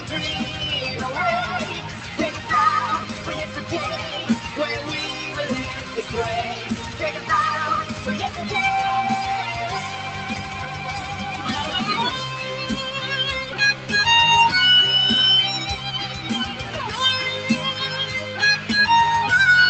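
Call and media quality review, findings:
Noise suppressor applied to music or sounds, across the whole clip: held tones and tails get pulled down by around 10 dB while attacks punch through, so it pumps and thins out. Speech-tuned suppressor is reading sustained material as noise. Top end stops near 8 kHz via the call codec.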